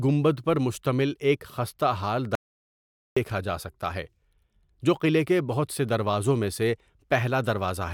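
A speech recording in which the sound cuts out abruptly at 2.35 s and returns mid-flow at 3.17 s, leaving about 0.81 s of total silence with no room tone. This audio dropout to silence likely came from the input being lost while the recorder kept writing zeros.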